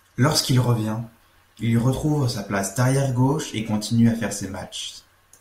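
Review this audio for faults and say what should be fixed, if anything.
Nothing needs fixing here. No faults can be heard at any point in the speech.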